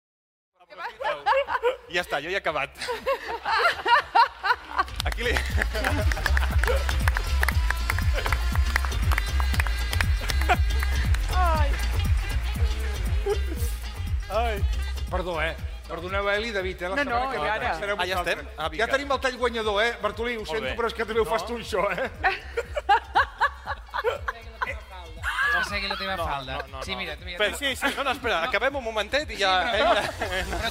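No technical faults; the smooth fade-in, from around half a second to 1.69 s, rises without any click or hard edge.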